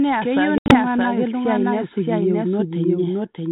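The speech is doubled from start to end. A doubled audio track means the same audio is mixed in twice. A second, full-band copy trails the first by about 0.7 s. It sits at roughly the same level. It carries no decay and no room colour, so it sounds like a clean overlap rather than an echo. The likely cause is the audio being captured a second time through a slower path.

From 0.58 to 0.76 s there is packet loss on an ADPCM call. About 100 ms of audio drops out, scattered across 120 ms. The longest gap runs 80 ms. That points to around ten lost packets. The holes are hard-edged silence. Afterward the decoder's predictor and step size no longer match the sender's. The speech returns with brief, slight distortion before settling. The underlying coding is light, band-limited G.726 at 32 kbit/s.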